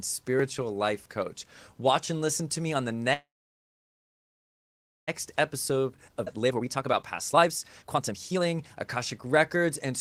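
At 3.13 s the sound halts, a brief fading tail giving way to about 1.8 s of silence before it resumes at 5.10 s with nothing lost. This call audio freeze likely comes from delayed packets draining the jitter buffer. From 5.33 s to 9.93 s the audio sounds hurried, running at 122% speed with unchanged pitch. This is jitter buffer speed-up: the receiver trims short pitch-period slices to shed roughly a second of backlog. Between 6.25 s and 6.28 s playback jumps forward almost seamlessly. This skip ahead drops roughly 0.7 s of audio and splices the two sides nearly directly.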